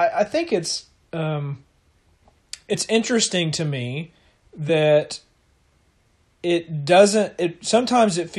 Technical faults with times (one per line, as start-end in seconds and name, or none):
2.73 compressed frames skipped
4.68 compressed frames skipped